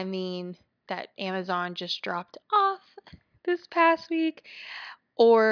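No technical faults can be heard anywhere in the recording.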